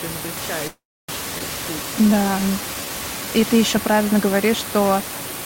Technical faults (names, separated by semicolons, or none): call audio freeze; skip ahead; jitter buffer slow-down